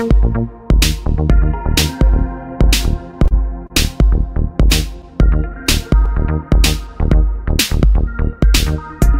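From 3.11 to 3.72 s, repeated stalls (stutter): late packets emptied the jitter buffer four times, so the sound drags through brief repeats of up to 32 ms, visible as duplicated waveform slices.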